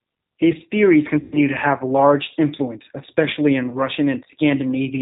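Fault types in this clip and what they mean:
G.729 codec: Throughout, the speech is band-limited below 4 kHz and sounds rough and slightly synthetic, which fits an 8 kbit/s G.729 codec rebuilding each frame from a filter, pitch predictor and a few pulses. Unlike a plain low-pass, the grainy, buzzy texture is audible.
VoIP packet loss concealed by the speech codec: At 1.20–1.38 s, just before "to have large influence", about 120 ms is missing, which fits six lost packets. The decoder stretches the last sound into a fading tone or noise instead of leaving silence. A shorter lapse at 3.70–3.80 s follows "large influence especially in".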